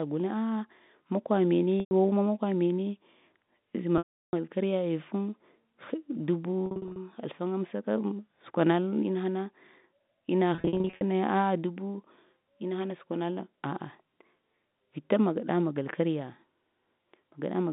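Speech carried over a G.711 telephone line, band-limited to roughly 150 Hz–3.7 kHz, with packet loss with pitch repetition at 1.80 s, 3.98 s, 6.66 s and 10.55 s. The receiver loops the last pitch period to fill each gap, so a spectrogram shows frozen, evenly spaced harmonics fading toward silence, worst over the 350 ms loss at 3.98 s.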